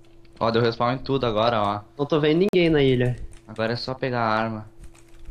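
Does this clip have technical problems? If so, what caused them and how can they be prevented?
Yes. From 2.49 to 2.55 s there is a corrupt frame muted dropout: damaged compressed data was rejected by the decoder and replaced with silence, leaving a hole of about 64 ms, which fits two lost frames. The waveform shows an abruptly flat stretch, and the spectrogram a clean vertical gap across all frequencies, with timing unchanged afterwards. Protecting the stream with checksums, error correction or retransmission, and enabling packet-loss concealment in the decoder, would prevent or mask it.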